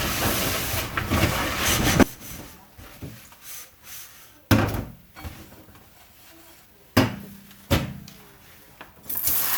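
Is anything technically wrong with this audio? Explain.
Yes. From 2.03 s to the end, the likely cause is one channel inverted: one stereo channel has reversed polarity, so whatever both channels share cancels when they are summed to mono. The sound drops by about 23 dB, leaving only the faint difference between channels.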